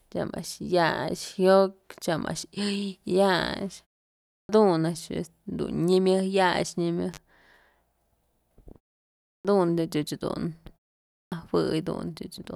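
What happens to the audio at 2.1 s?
Nothing goes wrong at 2.1 s; the speech is intact there.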